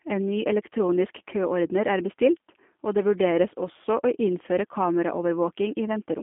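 From start to end the speech carries G.729 codec damage, plainly audible. Nothing sounds below about 200 Hz or above 3.5 kHz, and each syllable is rebuilt from a filter plus sparse pulses, giving a rough, buzzy, synthetic edge that a simple telephone band-limit would not add, which fits an 8 kbit/s codec.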